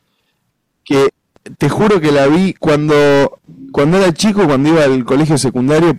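A harsh, buzzing fuzz sits on every loud syllable of this speech clip from start to finish. It is hard clipping: driven about 18 dB past what the stage can pass, roughly a third of the waveform is sliced flat, spraying high harmonics.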